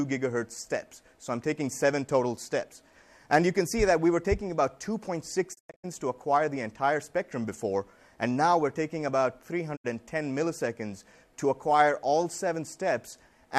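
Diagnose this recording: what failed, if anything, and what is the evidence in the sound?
Digital broadcast dropout at 5.53 to 5.85 s and again at 9.75 to 9.86 s, a reception and decoding failure at the receiver. In the first event the sound fades out in about 20 ms and breaks into several short holes totalling 216 ms across 288 ms, the longest 96 ms. That pattern fits frames of roughly 24 ms failing their checks. The second is a single 72 ms gap. The decoder muted until good frames returned, so that material is gone.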